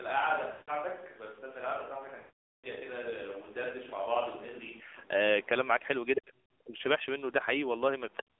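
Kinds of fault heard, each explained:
AMR narrowband mobile codec: Speech is squeezed through a low-bitrate mobile codec, around 7.4 kbps. It sounds buzzy and synthetic and is confined to roughly 250 Hz to 3.6 kHz. On a spectrogram the energy sits inside that band with empty space above, and the harmonics look smeared.
Switch to a distant microphone: From the start until 4.80 s the sound is roomy, hollow and thin in the bass. It is about 5 dB quieter, with faint room noise underneath, which likely means a far microphone stood in for the close one. The waveform then steps up abruptly.
Lost AMR speech frames: Damaged 20 ms frames were replaced by the decoder's repeat of the last good settings at falling gain. From 0.52 to 0.76 s and from 2.20 to 2.69 s the sound drones and fades out. These show as stretched, blurred harmonics that taper to silence.
Other side's voice leaking through: Around 6.16 to 6.21 s a brief scrap of a second voice slips in, only about 5 dB below the main speech. 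This is likely loudspeaker echo that the canceller missed. It appears as a short foreign burst on the spectrogram.
Speech suppressed in double talk: From 6.20 to 6.76 s, and again from 8.19 s to the end, the speech dips and chops, at worst by around 40 dB. This is likely the echo canceller ducking both talkers at once. The waveform shows gouged, near-empty gaps in the envelope.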